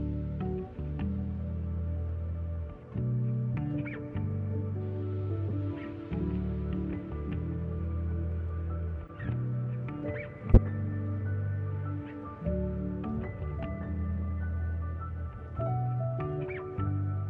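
Damaged bits inside compressed frames reached the decoder, which played those frames as if they were intact: a corrupt frame decoded, four times. Misread gains and codes throw energy into the wrong frequencies for the span of the bad frames, heard as short chirps and blips at 5.48 s (36 ms), 9.07 s (30 ms, faint), 10.52 s (58 ms, the loudest, peaking around -10 dBFS) and 13.50 s (88 ms), the last a longer burst spanning several consecutive frames.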